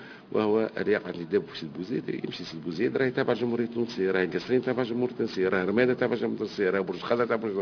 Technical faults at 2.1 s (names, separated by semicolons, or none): aliasing